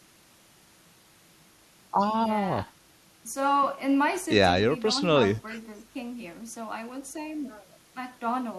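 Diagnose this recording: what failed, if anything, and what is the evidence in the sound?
Listening through the speech in this recording, nothing stood out that would point to a failure at any stage of the chain.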